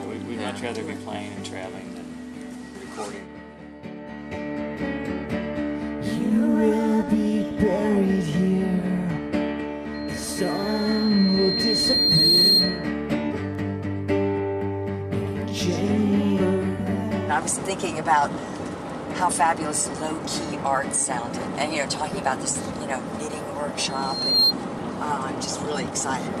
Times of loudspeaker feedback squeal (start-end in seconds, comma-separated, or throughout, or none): 9.94-12.91, 23.89-24.54